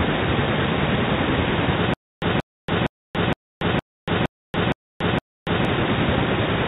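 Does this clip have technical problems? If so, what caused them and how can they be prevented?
Yes. From 1.94 s to 5.65 s there is a stutter with silent gaps. A 181 ms fragment repeats eight times, each followed by 283 ms of digital silence, in a steady 464 ms cycle. This is likely a stalled stream replaying its last buffer on every retry, so the original audio for that span is lost. A larger jitter buffer and proper loss concealment instead of fragment replay would prevent it.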